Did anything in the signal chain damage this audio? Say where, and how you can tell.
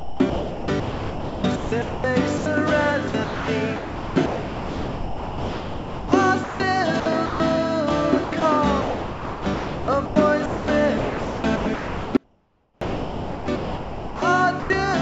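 Yes. Sound chopped by the voice detector, likely in call processing, at 0.00–2.46, 3.08–7.40 and 8.24–14.70 s: the spectrogram alternates real content with flat, smooth comfort-noise patches.

An audio dropout to a faint residue runs 12.17–12.81 s, likely a signal break ahead of a still-live input path. The waveform collapses abruptly to a trace about 35 dB down, then snaps back.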